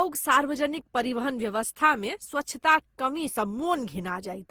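Throughout, the speech sounds swirly, hollow and smeared, with blurred attacks; likely generation loss, repeated Opus re-encoding around seven times, consistent with roughly 48 kbit/s, though content extends to 20.2 kHz.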